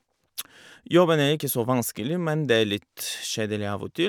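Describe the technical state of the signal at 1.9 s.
At 1.9 s the speech plays through intact, with no dropout, distortion or other technical fault audible at that point.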